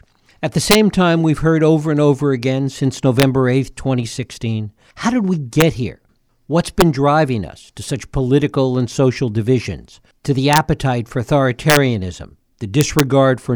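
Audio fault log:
0.71–0.75 s, 3.20–3.23 s, 5.61 s, 6.81 s, 10.53–10.58 s, 11.70–11.77 s, 12.81–13.00 s, integer overflow: on the loudest speech peaks, pushed only up to about 2 dB past full scale, the sample values ran beyond the integer range and wrapped around to the opposite extreme instead of saturating. Each wrapped peak becomes a full-scale jump, heard as a harsh crack just before "time we've heard over", after "how did we" and after "social divisions to the".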